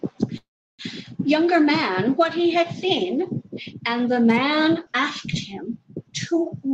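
A speech recording carried over a call path whose coding trims everything above about 12 kHz shows a call audio freeze from 0.37 to 0.82 s. Packets were likely stalled in transit, emptying the jitter buffer. The receiver stretches the last sound into a brief fading buzz that drops to near silence for roughly a third of a second. The speech then resumes where it stopped, with nothing lost but about 0.41 s of added delay.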